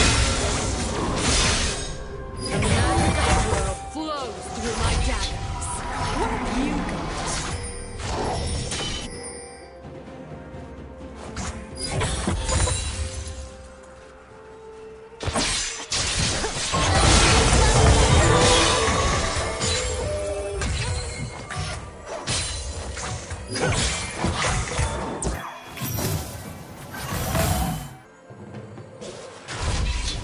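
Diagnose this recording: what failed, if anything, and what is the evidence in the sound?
Wrong sample rate at playback, 25.34 to 28.05 s: speed rises 1.45 times and pitch 6.45 semitones together, which fits 22 kHz audio played at 32 kHz. Time-stretching would keep pitch.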